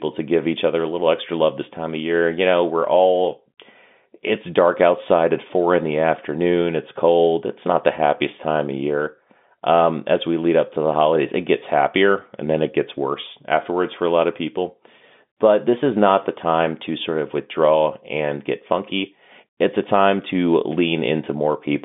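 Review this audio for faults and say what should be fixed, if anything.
Nothing here needs fixing; no faults are audible.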